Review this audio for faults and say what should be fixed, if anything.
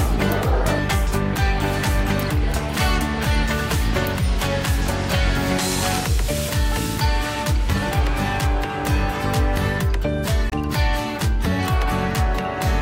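A Bluetooth dropout likely let packets miss their deadline at 10.50 to 10.54 s, cutting a 23 ms silent gap; the sound resumes as if it played on. Keep the headphones close and unobstructed, away from 2.4 GHz interference, so packets arrive in time.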